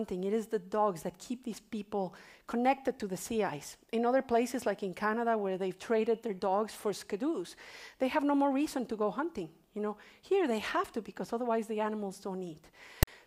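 File tags played as audio occur from 13.03 to 13.07 s, near the end of the clip. A block of text metadata was decoded as if it were samples: the character bytes form a rasp offset to one side, and the zero padding that follows drops to silence.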